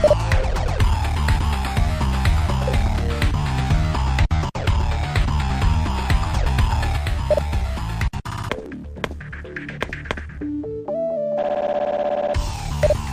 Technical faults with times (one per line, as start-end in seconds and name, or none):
5.50 dropped buffer (overrun)
7.38 dropped buffer (overrun)
8.66 dropped buffer (overrun)